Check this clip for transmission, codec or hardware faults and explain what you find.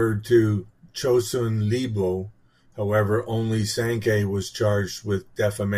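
The clip has one fault, present throughout the speech.

Clock slip clicks run from 0.11 s to 5.78 s, about every tenth of a second. They are faint, regular ticks. Two unsynchronised clocks, roughly 200 ppm apart, likely drop or repeat one sample each time.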